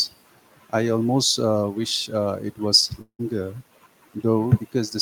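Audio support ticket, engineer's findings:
Speech at 3.01 s smears into a fading buzz, then near silence for about 80 ms; resumes at 3.21 s with 180 ms of audio gone. Likely long network dropout: packets stopped arriving, receiver concealment extended the last sound 175 ms.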